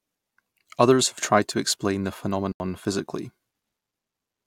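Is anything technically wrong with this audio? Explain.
Yes. From 2.52 to 2.60 s, an 80 ms block of digital silence: samples zeroed with no fade, so the sound cuts out and back abruptly as a short hole, unlike a softened dropout.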